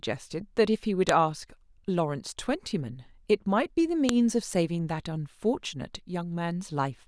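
At 1.09 s and again at 4.09 s there is a sharp, loud click: a file header played as audio. The clip is speech assembled from 3-second pieces, and each new piece arrived with its WAV header still attached. Those header bytes were read as samples, producing a snap regardless of the speech underneath. On a waveform each shows as a tall, near-instant spike; a spectrogram shows a thin vertical line spanning all frequencies.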